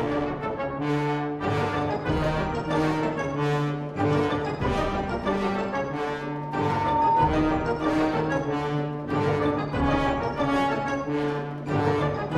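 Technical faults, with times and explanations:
6.11 to 7.33 s, loudspeaker feedback squeal: a single tone at 911 Hz swells up over about a second until it sits roughly 5 dB above the rest of the sound, then it's gone. What's happening is the mic is hearing the speaker it feeds, and at 911 Hz the loop gain tipped past one, so that frequency kept feeding itself and growing. It climbs until the amp limits it or somebody breaks the loop.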